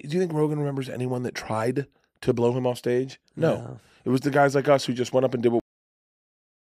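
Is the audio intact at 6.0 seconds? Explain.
No. A cut-off end: the final buffers were never written, so after "went up and did" the speech stops abruptly at 5.6 s and stays in digital silence through 6.6 s, with no decay.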